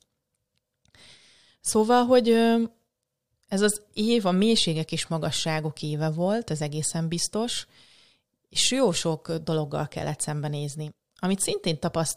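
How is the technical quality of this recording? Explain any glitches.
The technical quality of this recording is sound, with no glitches to explain.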